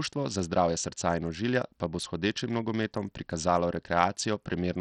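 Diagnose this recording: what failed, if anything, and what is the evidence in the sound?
Throughout the speech the treble flickers in and out, with a gritty, grainy noise and metallic aliasing riding on the sound. At the codec stage, this is likely Bluetooth SBC compression at a starved bit pool, consistent with roughly 64 kbps, leaving the upper sub-bands bitless and the rest coarsely quantised.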